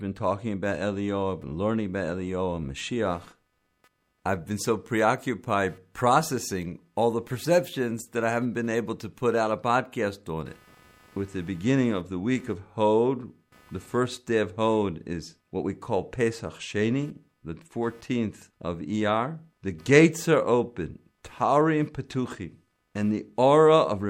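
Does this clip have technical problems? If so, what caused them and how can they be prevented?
Yes. Computer activity noise runs from 0.69 s to the end at 24.10 s: processor and other load changes disturb the audio circuit's shared ground, adding a buzzy, chirping pulse near 300 Hz, roughly 35 dB below the speech, that follows the computer's workload rather than the talking. Using a USB-isolated or external audio interface, or a ground-loop isolator, keeps the computer's ground noise out of the signal path.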